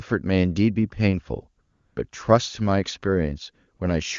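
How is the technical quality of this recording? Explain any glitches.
The recording has two short comfort-noise dropouts; the wideband phone coding sounds clean, pointing to one of the higher AMR-WB rates.

AMR comfort noise shows up from 1.61 to 1.95 s, and again briefly from 3.77 to 3.79 s. In both spots the phone decided nobody was talking and stopped sending speech frames, for about 340 ms and then 20 ms. The far end papered over the gap with synthetic noise built from a rough level-and-spectrum sketch, so the real background gives way to a smooth, even hiss that switches in and back out.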